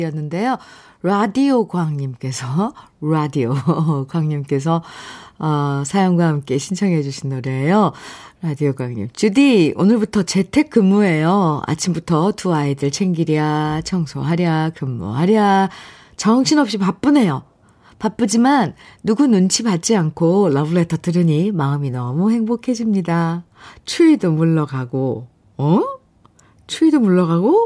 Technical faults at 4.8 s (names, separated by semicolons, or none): none